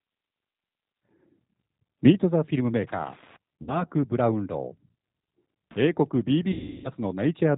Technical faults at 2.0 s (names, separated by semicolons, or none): G.729 codec